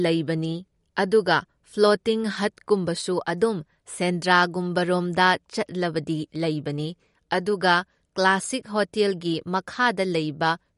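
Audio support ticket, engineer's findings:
MP3 compression, whole clip. Speech sounds watery and swirly, with metallic chirps on s sounds and smeared onsets. Likely a starved MP3 encode, consistent with about 48 kbps. Spectrogram: hard ceiling at 11.2 kHz, and patchy high bands flickering frame to frame.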